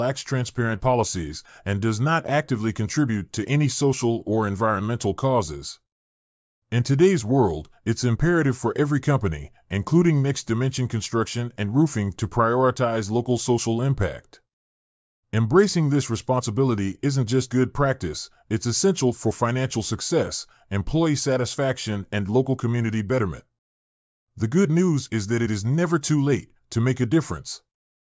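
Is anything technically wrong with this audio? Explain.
No, nothing in the recording shows a technical fault.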